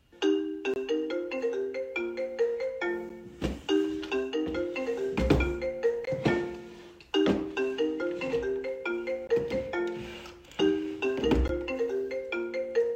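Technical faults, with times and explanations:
0.74 to 11.48 s, block of digital silence: five short dropouts to silence, at 0.74 to 0.76 s, 3.09 s, 6.05 to 6.07 s, 9.27 to 9.29 s and 11.48 s, each 10 to 22 ms long. The output buffer likely wasn't filled in time, so the sound cuts hard to nothing and back, and each event comes across as a tick or tiny hole.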